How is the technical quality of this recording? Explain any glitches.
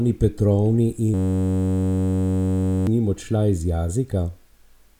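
The recording has one serious glitch: a system hang loop from 1.14 s to 2.87 s. The computer or audio driver stalled while the sound hardware kept replaying the same short stretch of its ring buffer. That stretch lasts 10.67 ms, which fits a 512-sample buffer, and it repeats 162 times. At a 93.8 Hz loop rate, the speech turns into a steady buzz, and around a second and a half of real audio is lost.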